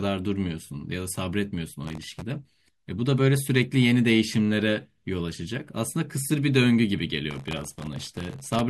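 From 1.83 to 2.23 s, and again from 7.31 to 8.60 s, the speech carries a gritty, tearing crackle. This is processor overload crackle. The processor repeatedly missed its deadlines for very short audio buffers, which fits a buffer of well under a millisecond. Each miss replayed a scrap of old audio with hard edges. Dozens of misses in the first burst and well over a hundred in the longer second one merge into continuous grit that stops when the load eases.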